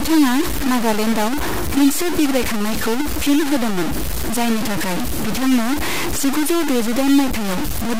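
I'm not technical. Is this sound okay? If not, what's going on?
No. The audio was likely stored with far too few steps of loudness, low bit depth without dither, roughly three bits, simply chopped off. From start to finish the speech sounds harsh and gritty, with distortion nearly as loud as the voice, and quiet moments sputter or vanish.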